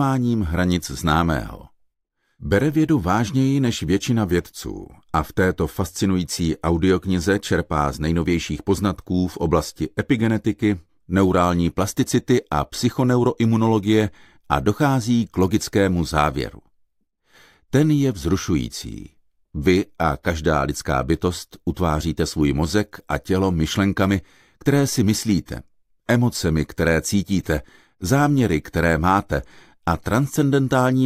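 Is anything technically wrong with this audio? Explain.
No, nothing technically wrong is audible anywhere in the clip.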